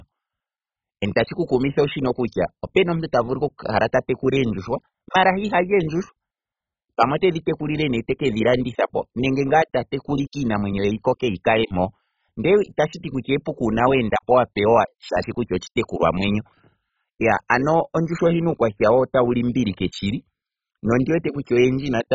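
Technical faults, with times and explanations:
Throughout, MP2 compression: the speech is dull, with nothing above 7.5 kHz, upper bands flickering on and off and a gurgling, granular roughness in what remains, likely a Layer II coder starved of bits, fitting about 16 kbps; coarser and more band-wise than MP3's watery swirl.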